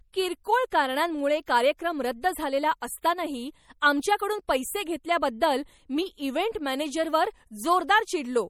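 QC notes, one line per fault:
Throughout: MP3 compression is the likely cause of the plainly audible watery, swirly texture on this speech, which fits a low bitrate near 48 kbps. A spectrogram shows a hard ceiling at 18.2 kHz and weak bands flickering on and off between frames as speckled gaps.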